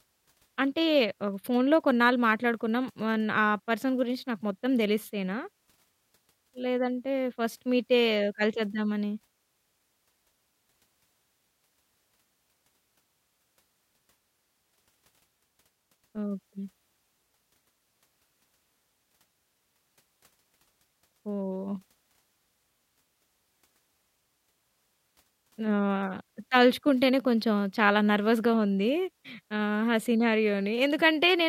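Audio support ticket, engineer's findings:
Listened to the speech clip in full and found nothing to flag, so no findings to log on this ticket.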